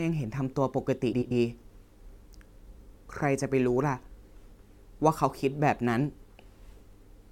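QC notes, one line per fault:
1.12–1.32 s and 2.56–2.76 s, frames out of order: in each stretch two adjacent blocks of about 93 ms, which fits runs of four frames, are decoded in swapped order, so the later block plays before the earlier one. The speech turns into a brief garbled flutter. Nothing is dropped, so the timing resumes normally after each stretch.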